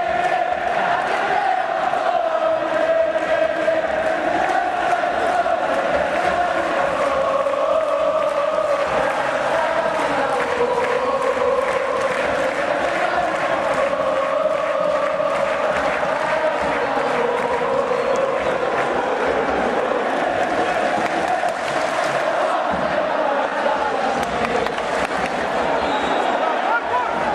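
At 23.49 to 23.53 s there is a short concealed packet loss. About 20 ms of audio failed to reach the decoder in time, and the receiver covered the gap by extrapolating the preceding sound, carrying its periodicity forward for tonal material or substituting shaped noise otherwise, before crossfading back into the received signal. The result is a brief smear or wobble in the sound at that point.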